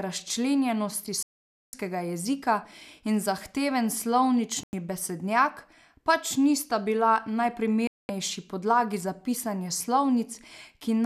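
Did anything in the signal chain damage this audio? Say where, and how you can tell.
Yes. The damage happened at the digital broadcast reception stage. This is a digital broadcast dropout that occurs three times in the speech. The sound mutes from 1.23 to 1.74 s, ending just before "jezika in zahteven". It mutes again from 4.63 to 4.74 s, and then from 7.87 to 8.10 s, ending before "podlagi za pisanje". Each gap lasts about half a second, 0.1 s or 0.22 s, which fits whole 24 ms frames being discarded. The receiver lost lock or rejected corrupt frames and muted. What was transmitted during those gaps is lost.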